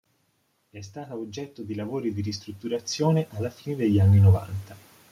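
From 0.58 s to 4.5 s the speech and the background noise behind it swell together, climbing steadily by about 16 dB over nearly four seconds rather than jumping. Nothing in the talker's delivery accounts for it; the whole sound field simply gets louder. This is automatic gain rising: the automatic gain control judged the incoming level too low and slowly pushed its gain up, lifting everything it received at once.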